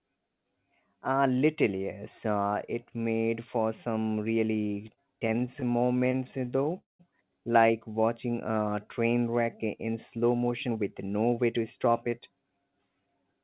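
Right after "it made for some", from 4.68 to 6.74 s, there's a run of repeated stalls (stutter): about thirty brief holds, none longer than 32 ms, adding up to roughly 0.32 s, or 15% of that stretch. Packets were arriving late, so the jitter buffer kept running dry and the receiver padded each gap by continuing the last sound. Nothing goes missing, but the speech drags and judders.

Straight after, from 6.78 to 7.01 s, the audio halts for about 0.21 s. The last sound is stretched into a short fading buzz that drops to silence for about 150 ms, then the speech picks up exactly where it stopped. This is likely a call audio freeze, with packets held up long enough to empty the buffer completely and push the delay up by that 0.21 s.

From 7.92 to 8.51 s, just before "train wreck in slow", there's a jitter buffer slow-down. The receiver rebuilt its reserve by repeating single pitch periods, adding about 53 ms. 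The speech plays at about 92% speed with unchanged pitch, so sounds come out drawn-out.

After "train wreck in slow", from 10.32 to 12.79 s, there's a jitter buffer speed-up. The buffer held more audio than it wanted, so the receiver trimmed out short pitch-period slices, roughly a fifth of a second in total. The speech runs at about 109% speed at the same pitch, sounding a bit rushed. Throughout, nothing comes through above 4 kHz, which fits a narrowband call codec such as G.711.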